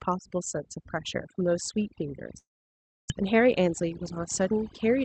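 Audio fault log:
Audio fault log:
Throughout: overdone noise removal. The denoiser is pushed too hard, so any frequency band sitting near its noise estimate gets pulled right down, taking the quieter parts of the speech with it. The gaps go nearly dead with little twinkly specks.
2.37–3.12 s: long network dropout, likely. The audio stops arriving and the last sound gets stretched into a buzzy or hissy tail that fades out, leaving near-silence for about 0.64 s. Speech picks up again further on, with roughly 0.4 s simply gone.
3.21–4.99 s: jitter buffer speed-up. After that gap the buffer has built up around a third of a second of extra delay, so the receiver keeps snipping out tiny pitch-period chunks to catch up. Speech runs about 8% faster at unchanged pitch and sounds a bit rushed.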